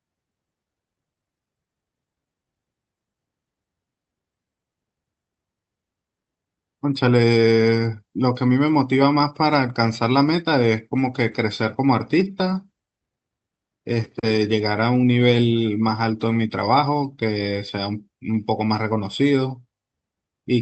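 No technical faults are audible in the speech; it carries the ordinary coding character of a call path, and its top end stops at about 8 kHz, consistent with an Opus link running at roughly 64 kbps.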